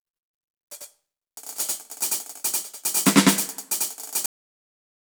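One channel runs late by about 93 ms throughout, which fits a 4096-sample buffer, and the mono sum turns every attack into a channel delay doubling, an equal-level slap echo. At 4.26 s the final buffers never reach the output, giving a cut-off end: the music stops mid-sound and drops straight into digital silence with no decay.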